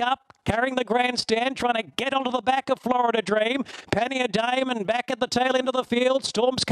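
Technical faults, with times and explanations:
Throughout, overlap-add ripple: the level swells and dips at around 20 times a second, with a depth of about 11 dB, giving a fast, rough flutter over the whole sound. The audio was split into windowed frames and rejoined with an overlap whose windows do not add up to a steady gain, so each frame boundary brings a dip. Unlike dropouts or stutter, nothing is lost or repeated; the ripple is perfectly regular and locked to the frame rate.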